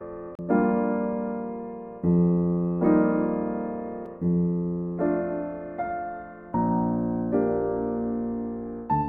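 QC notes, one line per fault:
0.35–0.39 s and 4.06 s: CD skip. The laser jumps to another turn of the disc's spiral. Playback mutes briefly, for roughly 40 ms at the first and only a few milliseconds at the second, then resumes elsewhere in the music.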